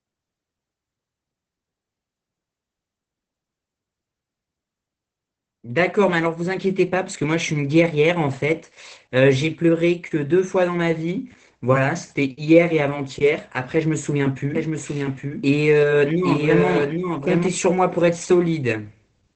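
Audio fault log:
Throughout: Opus voice compression. Nothing is heard above about 8.5 kHz, so the top of the band is cut away. The sound is muffled and slightly hoarse, with a faint robotic edge. This comes from the SILK speech coder running in wideband mode. It models the voice with linear prediction and codes the excitation coarsely, which points to a low bitrate of around 12 kbps. The damage is plainly audible.
14.55 to 17.47 s: doubled audio track. A second full-band copy of the speech runs alongside the original. It trails by about 0.7 s and sits about 5 dB lower. The copy has no decay and no room colour, so it sounds like a clean overlapping repeat rather than an echo. It starts and stops abruptly at those times. The likely cause is a second capture of the same signal through a slower path.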